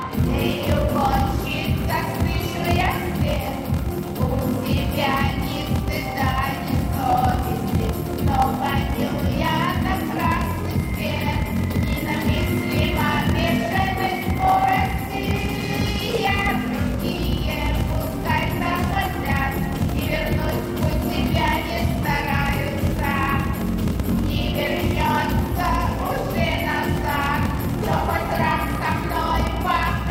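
From start to finish a block size mismatch (padded) is audible. Each block, which fits 1024-sample writes, is topped up with a short stretch of zeros, giving a 41.7 Hz buzz and playback at 0.889 speed. Unlike a sample-rate error, timbre stays normal.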